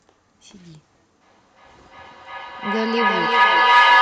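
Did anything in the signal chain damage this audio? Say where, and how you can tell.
Yes, at the call-processing stage there is a feedback echo between two devices sharing one room. From 1.21 s to the end, the speech keeps returning at a steady interval of roughly 0.4 s, each pass thinner and more ringing. The repeats build up instead of fading, peaking about 9 dB above the original speech. One device plays the other's transmitted audio into that device's microphone, and each echo canceller only removes its own playback, so the loop keeps feeding itself.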